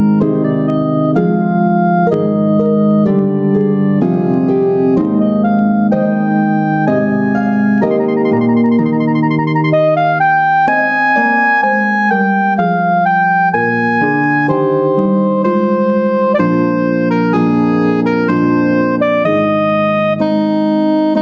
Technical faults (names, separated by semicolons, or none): gain pumping